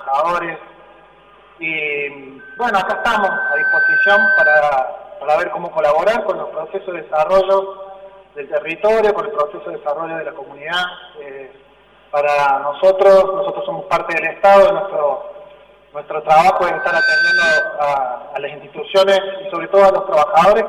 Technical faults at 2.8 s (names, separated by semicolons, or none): channel delay (comb filtering); loudspeaker feedback squeal